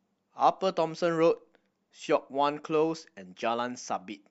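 Nothing technically wrong turns up in this short bit of speech, so there's no fault to point to anywhere in it.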